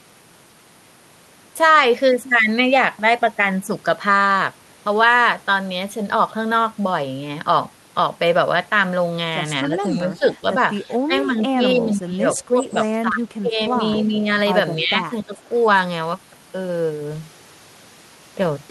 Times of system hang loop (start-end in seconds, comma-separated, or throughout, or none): none